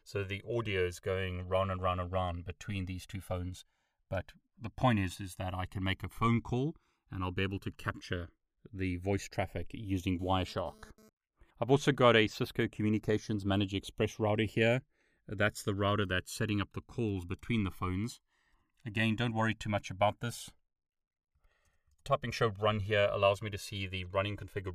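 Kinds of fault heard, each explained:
Channels drifting apart: the two channels run on separate clocks, off by roughly 150 ppm, so the delay between them creeps up to around 2 ms by the end. In mono this is slow flanging, and a spectrogram shows comb notches gliding gradually across frequency.
GSM phone buzz: from 10.19 to 11.09 s a nearby phone transferring data couples its 217 Hz radio bursts into the audio, giving a raspy, intermittent buzz about 28 dB below the speech. A spectrogram shows evenly spaced harmonic lines, and the waveform shows pulse trains.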